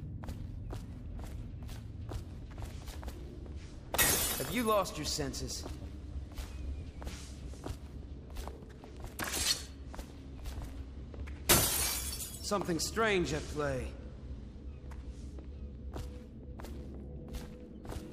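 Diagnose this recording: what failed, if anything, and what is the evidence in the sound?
Nothing failed, and the sound gives no evidence of a fault at any stage.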